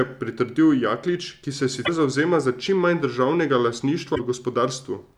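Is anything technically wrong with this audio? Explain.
Yes. Damaged data in a compressed stream causes two brief glitches, at 1.82–1.89 s, between "ki se" and "zavzema za čim manj", and at 4.12–4.20 s, just after "za čim manj državnega". Corrupted frames make the decoder lose sync and hunt for the next header, producing a short chirp or squawk. Each shows as an abrupt broadband smear or gap on a spectrogram and a jagged discontinuity in the waveform.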